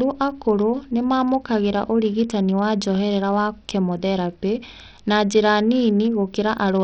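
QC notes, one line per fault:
Throughout, Bluetooth SBC compression, likely: speech treble flickers and gritty grain rides along, as starved upper sub-bands lose bits; nothing above 17.9 kHz, fitting roughly 64 kbps.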